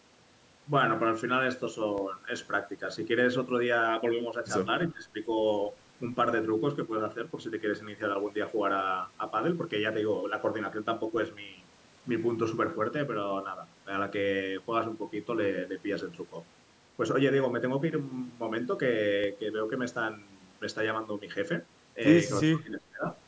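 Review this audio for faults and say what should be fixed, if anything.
A DC step shifts the waveform's zero line at 1.98 s, as if a converter recalibrated or an offset input was switched in. The offset holds until 19.24 s and then steps back, so each edge sounds as a low thump while the speech continues unchanged. Fix the offset at its source, or high-pass the signal before the level switching.

Speech suppressed in double talk is the likely cause of two dips, from 4.89 to 5.14 s and from 22.45 to 23.05 s. The echo canceller seems to have mistaken the talker for loudspeaker echo and pulled the speech down by roughly 15 and 20 dB. The call's microphone processing, which cuts everything above 8 kHz, is not part of this fault. A better double-talk detector, or gentler suppression while both sides are active, would prevent it.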